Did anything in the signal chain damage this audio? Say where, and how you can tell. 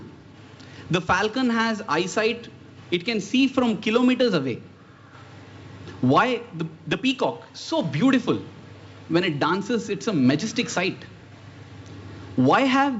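No, nothing in the signal chain damaged this audio. It went through a WebRTC call path, and the absence of content above 8 kHz fits the wideband G.722 call codec working normally.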